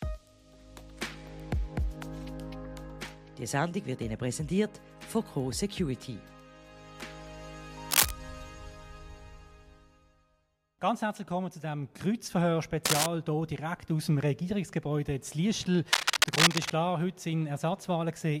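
Cable scratch noise appears from 7.90 to 8.11 s, again from 12.85 to 13.07 s, and longest from 15.93 to 16.71 s. Each time, dense, ragged bursts of crackle and rustle sit on top of the sound, a little louder than the audio itself. The likely cause is a worn cable, connector or control being moved, its contact resistance jumping erratically and injecting that uneven noise straight into the signal.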